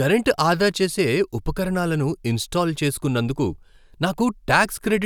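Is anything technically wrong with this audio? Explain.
No, nothing technically wrong can be heard here.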